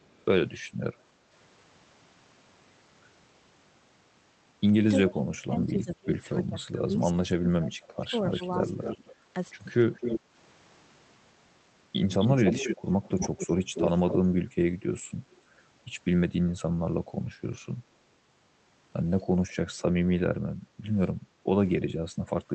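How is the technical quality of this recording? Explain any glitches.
The recording carries several call-processing faults: repeated echo, a long stretch where the talker is pushed down, and two brief dips in the room sound. All of it sits on a call codec path that cuts the top end off at 8 kHz and has the character of Opus at around 24 kbps.

Echo leak appears at 0.01–0.25 s, 8.29–9.15 s, 9.95–10.2 s, 12.19–14.14 s and 19.52–19.81 s. A delayed copy of the voice trails the original by 303 ms in the first instance and 263 ms afterwards. It is faint in the first and last instances (about 40 and 35 dB down) and strong in the middle three (about 10, 5 and 5 dB down). The likely cause is a loudspeaker-fed microphone whose echo canceller let residue through. A fixed-delay repeat like this sets it apart from reverberation.

Speech suppressed in double talk runs from 5.06 to 9.08 s. The talker's level sinks in pieces, by roughly 25 dB at worst, over about 3 s in total, likely because the canceller could not separate near speech from echo while both sides spoke. 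The wanted voice itself is cut.

Background gated by the echo canceller occurs at 10.21–10.34 s (about 6 dB, roughly 0.15 s) and 20.52–21.44 s (about 7 dB, roughly half a second). The room tone briefly dips and then returns. Unlike the double-talk suppression, only the ambience drops, and the dips are shallow.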